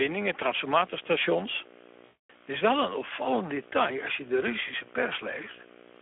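Speech runs under a steady buzz with hash and a whine at 15.7 kHz: video or display buzz, a screen or video cable coupling its 59.94 Hz field rate and line-scan tone into the audio, at roughly 15 dB below the speech. The voice itself sounds hoarse and noisy, squeezed into a 300 Hz to 3.4 kHz telephone band, the plainly audible damage of the Speex codec running at low quality, which fits a bitrate around 11 kbps. From 2.05 to 2.48 s the sound smears into a buzzy tone or coloured noise that fades, and stays weak as it recovers. This is VoIP packet loss concealed by the speech codec: about 240 ms of packets went missing, and the decoder stretched its last pitch and filter while lowering the gain.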